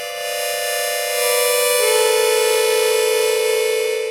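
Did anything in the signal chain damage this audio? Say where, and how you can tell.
No, nothing in the chain audibly damaged these sounds.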